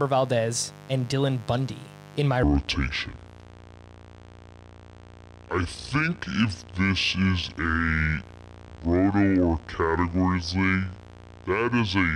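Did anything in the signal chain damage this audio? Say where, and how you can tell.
Yes. A steady, raspy mains buzz at 50 Hz sits about 20 dB below the speech for the whole clip, which points to the analogue wiring: a dimmer, a rectifier or a missing shield letting switching spikes in twice per mains cycle. Unlike a clean ground-loop hum, which is a smooth low tone, this has a harsh edge because its harmonics of 50 Hz extend up to several kHz.

From 2.43 s, right after "in my", to the end at 12.15 s, there is a section at the wrong speed: the audio runs at 0.587 times its proper rate, so the speech drops about ten semitones and becomes deep and slow. Pitch and tempo fall together, which separates this from a pitch-shift effect that would keep the timing intact. The stage is likely editing or playback, where the section was clocked at the wrong rate.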